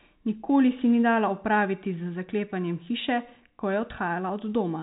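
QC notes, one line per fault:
No faults to note.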